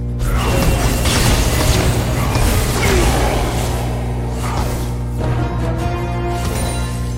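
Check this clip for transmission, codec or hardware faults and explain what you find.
There is one fault: mains hum, present for the whole clip. A ground loop or nearby transformer is leaking the 60 Hz power line into the signal path. It sounds like a steady low drone with some low harmonics, roughly as loud as the sound itself.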